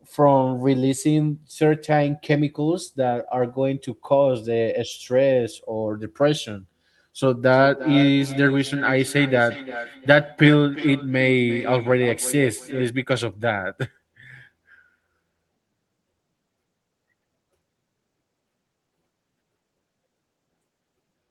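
From 7.52 to 12.93 s, feedback echo between two devices returns the speech about every 0.4 s, at about -13 dB. A single room echo would not repeat at a fixed cycle.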